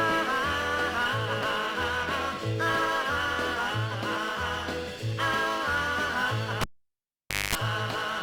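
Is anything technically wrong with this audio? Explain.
Yes. From 6.61 to 7.55 s a live cable is pulled and plugged in. Breaking the connection gives a pop and about 0.89 s of near silence. While only the plug's tip touches, a 0.22 s burst of 50 Hz mains buzz leaks in, and a second pop marks the sound's return.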